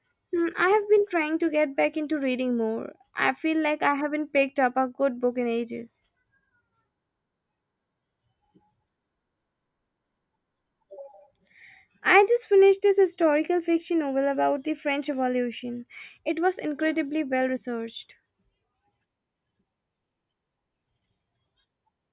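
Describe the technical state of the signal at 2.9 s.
At 2.9 s the speech plays through intact, with no audible dropout, distortion, clipping or other technical fault.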